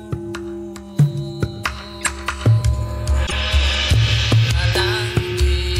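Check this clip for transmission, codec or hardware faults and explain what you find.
Two short codec faults are audible, both corrupt frames decoded. From 2.01 to 2.07 s and from 3.26 to 3.33 s, damaged compressed frames were still played. Misread gains and codes put energy in the wrong frequencies. The result is a brief error peaking near about -5 dBFS, then about -10 dBFS, lasting a few frames. Unlike a dropout, wrong sound is added instead.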